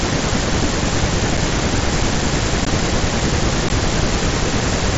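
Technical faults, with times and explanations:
1.37 s, 2.65 s, 3.69 s: unconcealed Bluetooth headset packet loss. Gaps of 7.5, 15 and 15 ms drop to silence or an idle pattern with abrupt edges, not smeared or repeated as concealment would.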